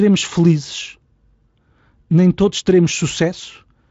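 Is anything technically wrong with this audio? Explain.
No, nothing in this speech clip stood out as a technical problem on listening.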